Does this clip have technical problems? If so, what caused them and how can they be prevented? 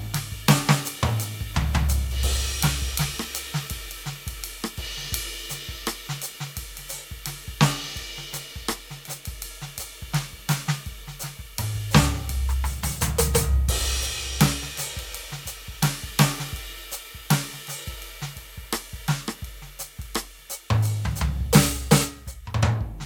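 No, this music clip has no technical faults to report. Nothing in it calls for a cause or a preventive fix.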